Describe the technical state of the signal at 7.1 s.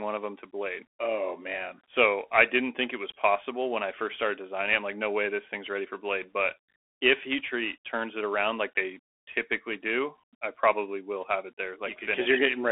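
At 7.1 s the speech is carried through a Bluetooth CVSD headset codec, which runs for the whole clip. Each sample is reduced to a single up-or-down bit, consistent with a 64 kbps stream, while an adaptive step tracks the waveform. Fast, loud rises outrun that step and distort, s sounds turn scratchy, and a granular hiss sits underneath. A spectrogram shows energy confined to roughly 300 Hz to 3.4 kHz above a grainy noise floor, and the waveform's steep edges appear slope-limited.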